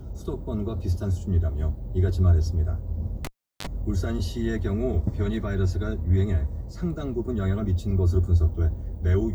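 At 3.25 s a live cable is pulled and plugged in: a pop, about 370 ms of near silence, a roughly 40 ms burst of 50 Hz mains buzz, then a second pop at 3.67 s.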